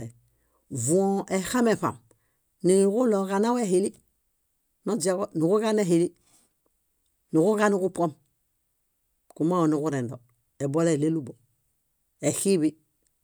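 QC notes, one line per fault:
Nothing stood out on listening to the speech recording.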